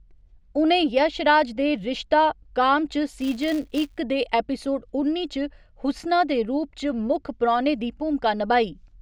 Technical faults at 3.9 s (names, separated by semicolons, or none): filter restarted on every block